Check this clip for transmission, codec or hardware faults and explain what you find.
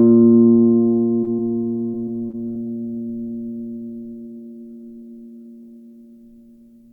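The music has repeated packet loss (robotic sound) in two stretches, from 1.15 to 1.53 s and from 1.91 to 2.57 s. Packets kept going missing. Each gap, none longer than 26 ms, was patched by stretching the previous sound. The music turns choppy, with short pieces dropped.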